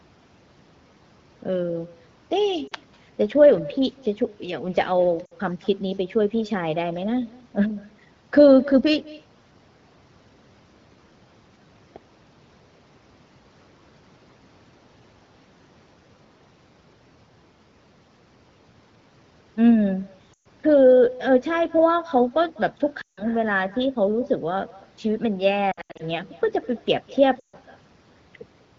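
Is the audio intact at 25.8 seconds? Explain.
No. From 25.71 to 26.03 s, radio errors corrupted AMR speech frames, and the decoder filled the gaps by repeating its last good settings at falling gain. About 200 ms of speech is lost, scattered over 280 ms, with the longest run 80 ms. The result is brief dips and warbly patches before the speech returns rough for a moment. Throughout, an echo with no canceller also returns the speech from a far-end loudspeaker about a fifth of a second late, leaving a faint, thin shadow about 22 dB down.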